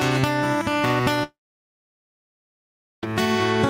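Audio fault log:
1.23–3.03 s, long network dropout: the last sound smears into a fading buzz, then about 1.7 s of silence follows, and the audio returns with 1.8 s skipped, likely because the data never arrived. The decaying tail and the lost stretch set it apart from a clean mute or a brief glitch.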